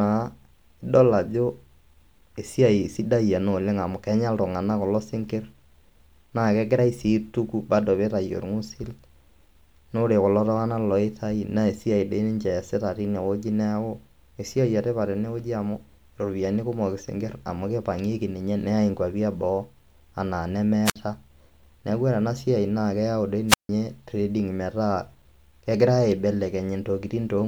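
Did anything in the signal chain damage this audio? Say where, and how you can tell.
Yes. The speech drops into brief holes of near silence, each preceded by a short rise of hiss. The first runs from 20.85 to 20.96 s, with a mute of about 58 ms. The second, just after "siaai naa keyau dei", spans 23.48 to 23.69 s and mutes for about 155 ms. This is a wireless microphone squelch dropout at the radio link. The FM signal faded, and the receiver's squelch cut the output until reception recovered.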